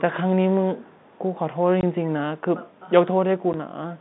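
From 0.80 to 1.18 s, an echo leak: the far end's echo canceller was likely not removing everything its microphone picked up from the loudspeaker, so a copy of the speech returns about 0.39 s late, very faint, roughly 35 dB down.

At 1.81 s, packet loss filled with silence: audio was lost in transit and the receiver substituted nothing, leaving a 20 ms hard-edged hole that fits two 10 ms packets. A shorter 10 ms dropout at 3.53 s fits one.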